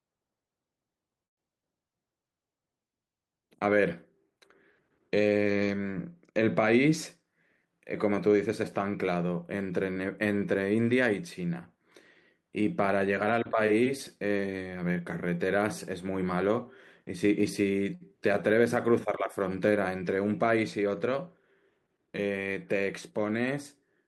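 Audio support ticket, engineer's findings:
Call audio freeze, 1.25–1.39 s. Audio stops for about 0.14 s, mostly silence (about 110 ms) after a brief fading tail. Likely jitter buffer underrun from delayed packets; receiver extended last sound then gave up. Unlike a dropout, nothing lost: audio resumes exactly where it halted, gap inserted, timeline pushed back about 118 ms.

Short stall from a late packet, 17.95–18.02 s. Last sound held about 56 ms too long, slight buzz or dip, no silence. Jitter buffer ran dry, receiver stretched the final sound until the packet landed. Shorter than the 1.25 s freeze and filled with sound instead of going quiet. No content missing, continues from same point.

Jitter buffer speed-up, 7.23–9.04 s and 20.58–21.26 s. Speech runs about 6% fast, sounds hurried, pitch unchanged. Buffer overfilled, receiver cut repeated pitch-period-length slices to drain excess delay, around 150 ms removed in the first span, around 50 ms in the second. 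Unlike resampling or tape-speed error, no pitch rise.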